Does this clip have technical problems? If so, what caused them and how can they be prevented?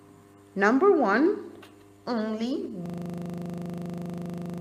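Yes. From 2.86 s to the end there is a system hang loop: the system froze while the sound hardware kept replaying one 40 ms buffer, producing a rapid buzzing stutter at 25 Hz. The waveform shows identical 40 ms segments repeating exactly. The spectrogram shows a regular pattern of evenly spaced vertical stripes. To prevent it, run audio on a high-priority thread with a watchdog that mutes the output when the buffer stops being refilled.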